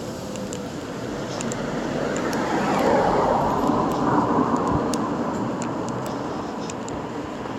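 Nothing stood out on listening to this recording of sounds.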